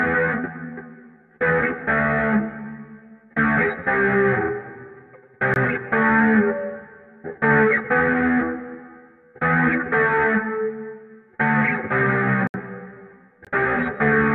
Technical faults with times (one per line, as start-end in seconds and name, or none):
5.54 block of digital silence
12.47-12.54 block of digital silence
13.45-13.47 block of digital silence